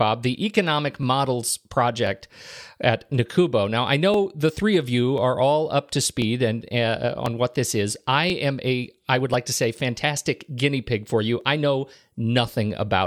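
From 1.03 s to 12.45 s the speech carries a regular click, repeating every 1.04 s for about ten events. This pattern is most likely clock drift buffer slips. Two devices on independent clocks disagree by something like a tenth of a percent, so the buffer between them drifts until a few dozen samples are dropped or repeated. On the waveform each slip is a small step discontinuity. On a spectrogram it is a thin broadband vertical line at each 1.04 s interval.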